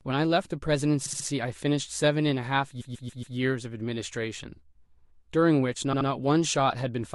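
Repeated frames make the speech stutter at 1.05 to 1.26 s, 2.80 to 3.36 s and 5.92 to 6.08 s. Blocks of about 60, 140 and 70 ms replay three, four and two extra times, which lengthens the audio instead of leaving gaps as dropouts would.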